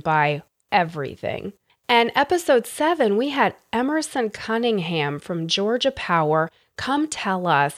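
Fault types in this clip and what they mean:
No technical faults are audible anywhere in the speech recording.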